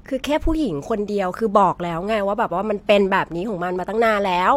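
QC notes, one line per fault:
Nothing stood out on listening.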